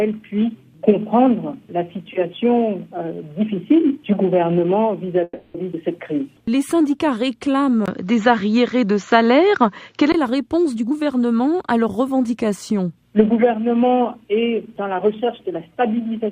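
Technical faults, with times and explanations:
5.23 to 5.56 s, call audio freeze. The sound stops and is stretched into a fading tail for about 310 ms, ending in a brief silence. This is likely delayed packets draining the jitter buffer. Nothing is lost, but everything after arrives 310 ms late.
7.86 to 10.14 s, input switched to a poorer device. A 20 ms silence marks the switch. Then the sound turns duller, with nothing above 7.3 kHz, a level shift of a few decibels and a new faint noise floor. This is likely a change to a narrower-band microphone.
10.76 to 12.08 s, jitter buffer speed-up. The audio runs at 123% speed but keeps its pitch, so it sounds hurried. The receiver is trimming short pitch-period slices to shrink a backlog, removing roughly a third of a second in total.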